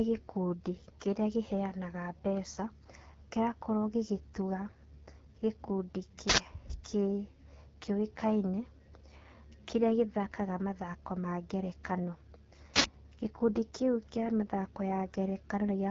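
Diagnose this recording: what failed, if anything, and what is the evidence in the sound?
Codec stage: AMR wideband (HD Voice) coding at 8.85 kbit/s makes speech rough and raspy throughout, with nothing above 7 kHz. The grain, not just a dull top, separates it from simple low-pass filtering.

Driver or buffer stage: an uninitialised buffer gives loud digital-noise bursts of about 85 ms at 6.29 s and 12.76 s, which fits a 4096-sample buffer. Noise fills the gap instead of silence, unlike a dropout.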